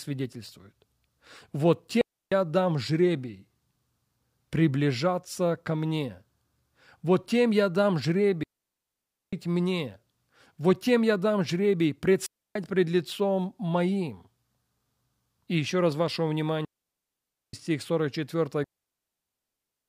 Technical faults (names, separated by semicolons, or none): digital wireless dropout